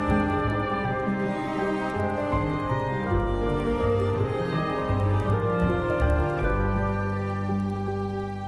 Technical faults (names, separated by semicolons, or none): resampler restarted on every block